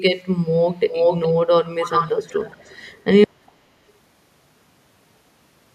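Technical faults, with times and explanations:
0.89–1.34 s, 1.65–3.04 s and 3.46–3.52 s, echo leak: a copy of the speech returns about 0.42 s late, first roughly as loud as the original, then noticeably quieter, then barely audible. This is likely a far-end loudspeaker feeding its microphone past an incomplete echo canceller.
3.24 s to the end, audio dropout to silence: the speech cuts off mid-flow into silence with no room tone, and never returns. This likely comes from the input being lost, through a disconnect, failed link or mute, while the recorder kept writing silence.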